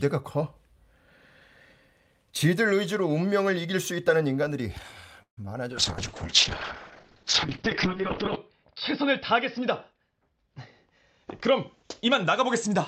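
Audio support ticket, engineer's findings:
Buzz at 5.22 s decaying to about 110 ms of silence, audio resuming at 5.38 s with nothing skipped. Call audio freeze, likely a jitter buffer underrun from delayed packets.

Brief smear 5.45–5.47 s. Short concealed packet loss: about 10 ms never reached the decoder and was synthesised by concealment before blending back.

Speech turns rough and muffled from 5.72 s to end. Call bitrate drop, 64 to 8 kbps: Opus codes coarsely, bandwidth falls from 20 kHz to 6 kHz.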